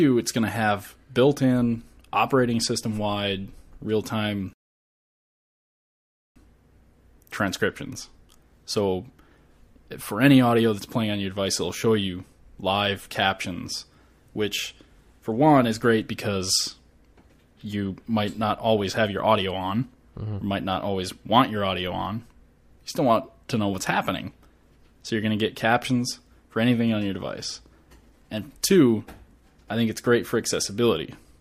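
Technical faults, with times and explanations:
4.53 to 6.36 s, rebuffering stall: playback ran dry and fell silent for about 1.8 s, then resumed exactly where it stopped, adding time without losing any audio.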